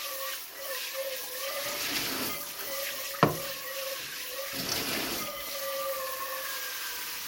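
Throughout, the sound is swirly, smeared and hollow, with blurred attacks and nothing above 17.1 kHz. This generation loss likely comes from about seven passes through a 96 kbit/s MP2 codec.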